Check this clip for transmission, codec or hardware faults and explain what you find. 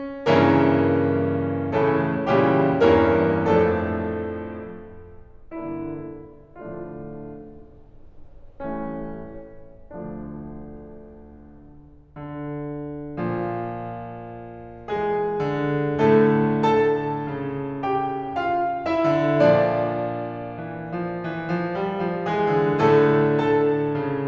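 Nothing wrong can be heard anywhere in this music.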